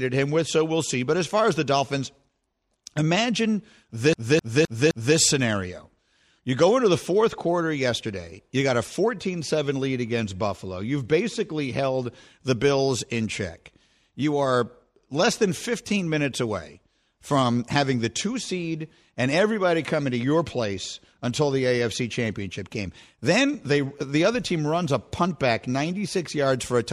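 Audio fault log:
4.13 to 5.17 s: CD stuck on one turn. A 0.26 s slice of speech repeats four times, with short mutes at each jump. The laser keeps skipping back one track.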